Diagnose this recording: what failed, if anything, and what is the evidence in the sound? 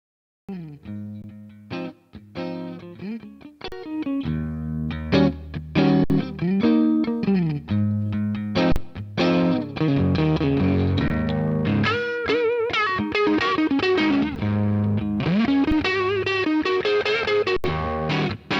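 The capture began late, a cut-off start at the recording or stream stage. The first 0.49 s is digital silence, then sound enters abruptly mid-event at 0.49 s with no attack or fade, as if joined already in progress.

Repeated underruns with a held sample point to the driver or output buffer. The waveform freezes flat at 1.22, 3.68, 6.04, 8.72, 11.08, 14.35, 15.71 and 17.57 s, for 7 to 75 ms. Roughly that much audio is lost each time.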